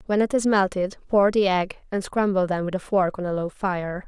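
Speech recording; no technical faults detected across its duration.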